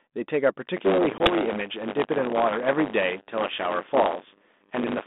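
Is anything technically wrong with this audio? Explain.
Yes, two faults are audible in this speech clip, which is carried over a G.726 ADPCM line at 32 kbit/s with its band limited to roughly 200 Hz to 3.6 kHz.

Buffer tearing runs from 0.76 s to the end of the clip. The software filling the output ring buffer has drifted out of step with the hardware reading it, so the two pointers cross within every period. In each buffer, roughly a seventh of the audio is stale material from about 20 ms earlier, with hard joins on either side of it. Because this repeats every period, it produces a steady robotic buzz at 100 Hz that rides on the speech and drops away when the signal stops.

Packet loss on the ADPCM call occurs at 1.18 s. A 20 ms gap, consistent with about one lost packet, is filled with silence, so the audio drops out abruptly. ADPCM codes each sample as a difference from an adaptive prediction, so the missing data also leaves the decoder's predictor and step size out of step with the sender's. 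When the speech returns, it comes back slightly distorted, and it recovers by about 1.36 s.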